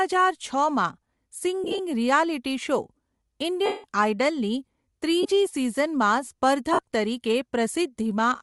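Throughout, the speech carries a breathy, grainy edge in the upper band, where hiss stands in for real detail. That is likely Bluetooth LC3 compression at a rate that fits about 48 kbps. Unlike MP3-style swirl, the roughness is noise-filled rather than watery.

Lost LE Audio frames follow at 1.64–1.79 s (several short breaks scattered across about 150 ms), 3.66–3.84 s, 5.23–5.26 s and 6.73–6.79 s. The decoder repeats the last spectrum with scrambled phase, so each gap becomes a noisy smear rather than a clean silent dropout. The 180 ms loss at 3.7 s fades gradually toward silence.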